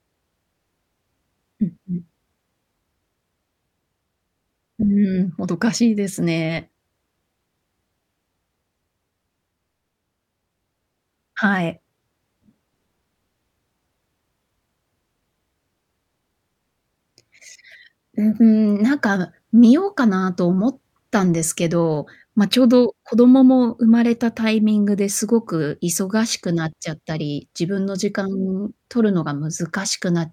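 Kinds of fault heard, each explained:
Nothing stood out on listening to this speech recording.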